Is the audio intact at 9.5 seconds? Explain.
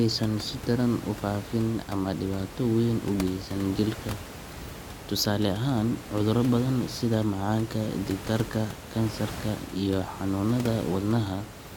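Yes, the speech at 9.5 seconds is intact, with only the room's own background noise sitting about 13 dB beneath it as part of the recording.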